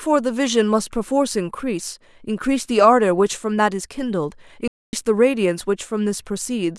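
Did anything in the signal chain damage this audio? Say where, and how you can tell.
Yes, at the playback stage. The speech stops mid-flow at 4.68 s and the output is silent until 4.93 s, a gap of about 0.25 s. This is likely a playback stall, with the player starved of data. Unlike a dropout's brief clicky gap, this silence lasts a noticeable quarter-second.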